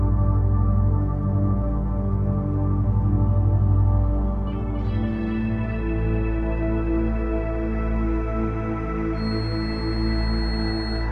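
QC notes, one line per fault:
9.12–11.12 s: feedback whistle, a thin 4.3 kHz tone, slowly swelling and fading, roughly 20 dB under the sound, likely a speaker-to-microphone loop held just short of runaway.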